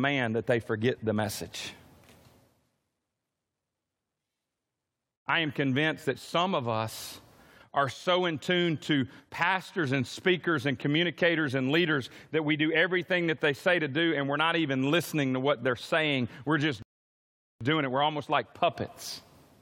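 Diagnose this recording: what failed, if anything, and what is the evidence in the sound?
A rebuffering stall at the playback stage. At 16.82 s the speech cuts to silence. It resumes at 17.61 s exactly where it stopped. Nothing is missing, but 0.78 s is added. The player ran out of downloaded audio and waited for more to arrive.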